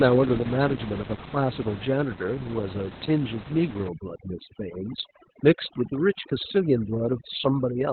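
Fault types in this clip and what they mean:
Opus voice compression: Throughout the clip the speech is confined to a narrow band with nothing above about 4.3 kHz, which points to Opus running its SILK linear-prediction coder in narrowband mode at a very low rate, around 8 kbps, with 20 ms frames. SILK models the vocal tract and spends very few bits on the excitation, so here the damage is heavy: the voice sounds muffled, hoarse and slightly robotic, with little detail in the consonants.
overdone noise removal: From 3.88 s to the end at 7.92 s, a noise reduction stage works far too hard against the room noise, which sits about 14 dB below the speech. It pushes individual frequency bands close to zero whenever their level nears its noise estimate, and it takes the quieter parts of the voice with them. The background drops and breaks up into twinkling specks.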